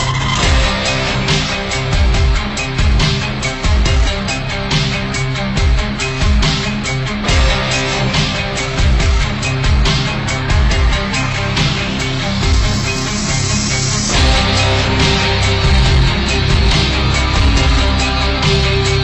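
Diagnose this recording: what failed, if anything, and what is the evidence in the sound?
Between 11.6 and 13.1 s the top of the band dulls and a faint metallic shimmer sits above it: imaging from linear upsampling at the sample-format conversion stage. Straight-line interpolation, consistent with 24 kHz raised to 44.1 kHz, filters weakly, leaving a mirrored copy from 12 to 24 kHz roughly 30 dB down.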